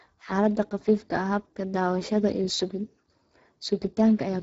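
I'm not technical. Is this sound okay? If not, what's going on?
No. The speech sounds noticeably rough and hoarse from start to finish, with a grainy edge. This is Speex codec damage: an older voice-chat compressor squeezed the audio into very little data, dropping fine vocal detail and everything above about 7.7 kHz.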